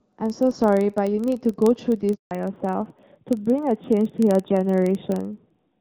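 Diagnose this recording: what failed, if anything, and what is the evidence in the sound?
Three faults: a filter restarted on every block, a handover gap and a fallback to narrowband.

In the signal processing, a filter restarted on every block loses its state at each buffer boundary and starts from silence. The result is a steady buzz near 23.4 Hz that runs through the whole clip and tracks the level of the speech, which fits a 2048-sample block.

On the network side, the call was handed over between links. For 160 ms, from 2.15 to 2.31 s, no speech frames arrived. The voice fades within a few tens of milliseconds and stays silent until the new link starts carrying audio.

At the codec, from 2.31 s to the end, the call falls back to narrowband. It drops from AMR-WB at 12.65 kbit/s, which sounds clear before the handover, to AMR-NB at 7.4 kbit/s. Nothing above 4 kHz remains, so the voice becomes duller and rougher.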